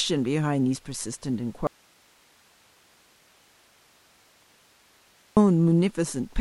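Speech that suffers an audio dropout to a faint residue: at 1.67 s it cuts out abruptly and only low hiss, roughly 40 dB down, remains until 5.37 s, a 3.7 s gap. It's likely a signal loss upstream while the downstream path stayed live.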